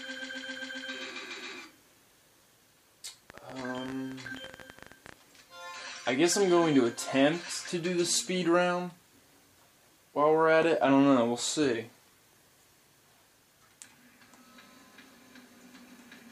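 A train of clicks from 3.30 to 5.14 s: around thirty similar pops, about 16 per second, unevenly spaced and poking above the sound, likely from electrical interference.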